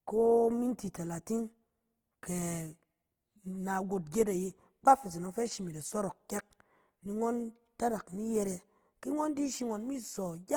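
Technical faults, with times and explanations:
Throughout, Opus compression: the speech sounds rough and grainy, with a noisy texture that is plainly audible across the whole clip. There is little swirling or hollow dropout, and the top end still reaches about 20.3 kHz. This is likely Opus in its music-oriented CELT mode at a low rate, around 16 kbps. With too few bits, it keeps each band's energy but fills the fine detail with folded copies or noise, which produces the grain.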